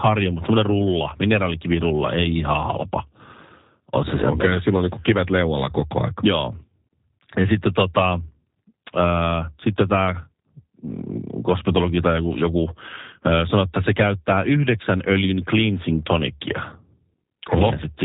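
Throughout, the speech carries G.729 codec damage, plainly audible as rough, buzzy, synthetic timbre, consistent with 8 kbit/s model-based coding; a spectrogram shows everything above 3.8 kHz cut off.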